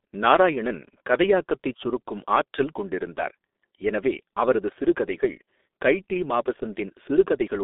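All through, the speech has heavy G.723.1 codec damage: band cut to 250 Hz to 3.6 kHz, and coarse frame coding leaves it muffled, hoarse, consonants smeared.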